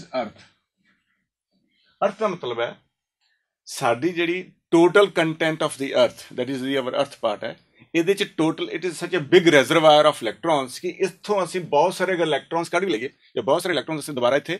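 From 12.52 s to the end, a time-stretched section runs 1.43 times faster with pitch unchanged, sounding rushed, unlike a speed change; likely software squeezing audio to fit.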